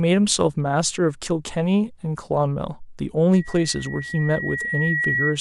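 A speech clip with loudspeaker feedback squeal from 3.33 s to the end at 5.40 s. A single tone near 1.9 kHz swells over about two seconds. It rises to roughly the level of the speech. The microphone is hearing its own loudspeaker, and the loop gain at that frequency exceeds one.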